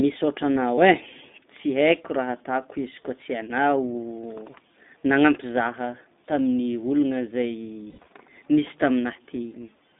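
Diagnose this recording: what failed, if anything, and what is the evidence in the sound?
Narrow, slightly rough and synthetic speech confined to roughly 200 Hz to 3.7 kHz throughout points to the codec stage: the iLBC codec, consistent with its 15.2 kbps, 20 ms frame mode.

At 0.76 to 0.79 s, and scattered from 7.90 to 8.08 s, speech turns into a brief held, buzzy vowel. These are lost iLBC frames in the network stage, concealed by repeating pitch cycles, with the longest run near 70 ms.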